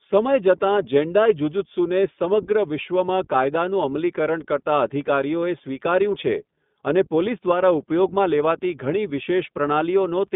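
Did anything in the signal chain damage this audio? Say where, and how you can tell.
Yes. Throughout the speech there is a slightly rough, synthetic quality, with nothing above 3.8 kHz and the lows thinned below about 150 Hz. This is the iLBC codec stage: each short frame, consistent with 20 ms at 15.2 kbps, is coded independently, leaving plainly audible damage.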